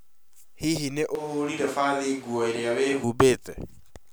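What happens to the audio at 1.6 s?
At 1.6 s you're in the middle of a switch to a distant microphone, running from about 1.15 s to 3.04 s. The speech suddenly goes roomy and hollow, loses its low end, and drops by roughly 10 dB, with room noise creeping up underneath it. The likely cause is that the close mic's signal dropped out and a far-off mic, something like a camera's, took over. It snaps back just as abruptly at the end.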